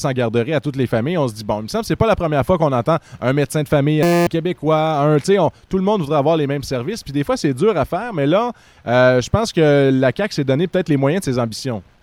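A system hang loop runs from 4.03 to 4.27 s. Instead of moving on, the audio locks onto one tiny slice, about 5.8 ms long, and repeats it about forty times. At that length the loop becomes a steady buzz at 172 Hz rather than a stutter. The loop length fits a 256-sample buffer. The machine or its driver stalled while the sound hardware kept replaying the same ring buffer. About a fifth of a second of real audio is lost.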